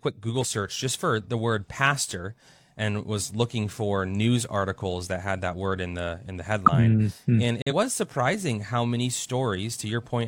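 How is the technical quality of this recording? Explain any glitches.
The recording has two codec glitches, both from damaged compressed frames.

At 6.66 to 6.69 s, right after "in the in the", a corrupt frame was decoded. Flipped bits misplaced energy, giving a brief burst, seen as a vertical smear on a spectrogram.

From 7.62 to 7.73 s, just before "was surprising how many", a corrupt frame was muted. The rejected data became abrupt silence, pointing to one lost frame and showing as a flat waveform gap.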